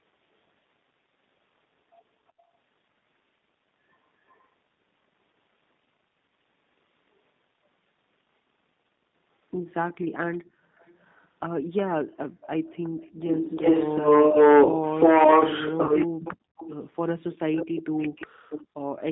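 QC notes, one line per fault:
Throughout: G.729 codec. The sound is squeezed into a telephone band of about 150 Hz to 3.7 kHz and rebuilt at 8 kbit/s from a filter, a pitch predictor and a few pulses, giving a steady rough, slightly synthetic grain. Unlike the brief faults below, this grain never comes and goes.
2.27–2.32 s and 4.26–4.49 s: echo leak. A very faint copy of the sound comes back about 368 ms late, well below the direct sound. This is likely the far end's echo canceller letting some of its loudspeaker pickup through. It adds a lagging ghost rather than taking sound away.
2.32–2.51 s, 12.05–12.41 s, 16.07–16.56 s and 17.82–18.49 s: background gated by the echo canceller. The room sound ducks by up to about 30 to 40 dB for a few hundred milliseconds, then returns when the canceller releases. Nothing is added or distorted. The ambience simply sinks out and comes back.
5.32–5.34 s and 15.85–15.94 s: VoIP packet loss concealed by the speech codec. 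About 20 ms and then 40 ms of audio went missing, and the decoder filled each gap by extending its last pitch and filter. The result is a brief buzzy, fading smear that stays weak for a moment afterwards, rather than a clean silence or a ducked background.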